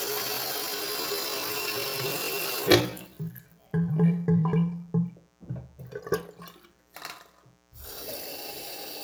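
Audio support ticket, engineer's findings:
Mains buzz, throughout: steady raspy 60 Hz buzz with harmonics into the kilohertz range, roughly 35 dB under the signal. Switching spikes from dimmer or rectifier, unlike a smooth, pure low hum.

Time-stretched section, 0.0 to 4.88 s: runs at 0.61x speed, pace drags, pitch unchanged, unlike a tape slowdown. Likely cause: stretching software repeating short pieces to fill length.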